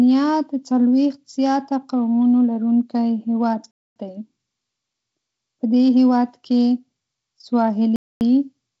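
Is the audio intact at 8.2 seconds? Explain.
No. A gap between chunks runs from 7.96 to 8.21 s: 250 ms of hard-edged silence at a chunk join. Unlike a dropout, nothing is lost; the sound simply resumes late.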